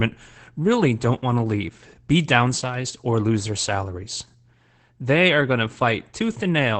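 Opus voice compression runs through this entire speech clip, using its SILK linear-prediction mode with the band held to wideband, about 8 kHz. The coarse excitation coding fits a bitrate near 12 kbps and leaves the voice audibly muffled, hoarse and slightly robotic.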